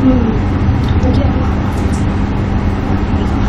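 At 1.15 s the speech is broken by a very brief glitch. This is damaged data in a compressed stream. A short run of the encoded bytes is wrong at that point. The decoder cannot read the frame correctly and loses its place. It then hunts for the next valid frame header before playback resumes. The fault lasts only a few hundredths of a second.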